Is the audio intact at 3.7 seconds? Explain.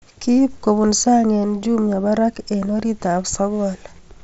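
Yes, at 3.7 s the speech runs on without any dropout, glitch or distortion, only the band limit of the Bluetooth mSBC headset link, which leaves nothing above about 7.7 kHz.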